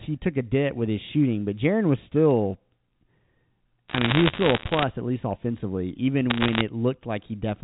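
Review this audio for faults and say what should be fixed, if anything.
Bit errors on a digital phone line crackle through two bursts, from 3.89 to 4.84 s and from 6.30 to 6.61 s. Around one bit in a hundred flips, and each flip corrupts a single sample of the telephone-band G.711 audio. Hits on the sign or high bits give sharp ticks. Unlike packet loss, the speech carries on intact underneath, with no gaps. Fix the line or interface fault, or carry the call over a link with error detection and correction.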